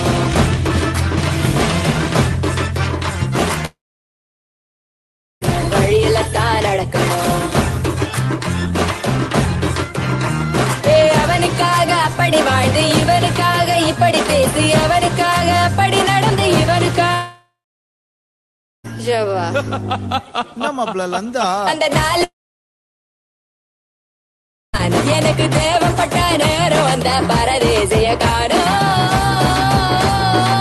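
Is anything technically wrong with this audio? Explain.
Yes. At 3.65–5.43 s, 17.14–18.86 s and 22.24–24.75 s the sound breaks into a brief fading buzz, then silence for about 1.7, 1.3 and 2.4 s. It resumes further on. This is likely a long network dropout: the receiver's concealment briefly smoothed over each gap, and the missing audio never arrived.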